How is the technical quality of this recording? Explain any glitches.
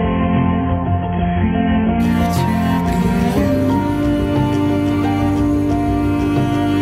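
The quality is compromised for the first two seconds. From 0.0 to 2.0 s this is an adaptive stream starting at a low bitrate: the player began on a cheap encoding, which sounds like roughly 16 kbit/s AAC, and then stepped up to a higher one, consistent with about 96 kbit/s. Until that switch nothing is present above 3.4 kHz, so the sound is dull and muffled with stronger codec artefacts. At 2.0 s the treble returns abruptly, with no gap.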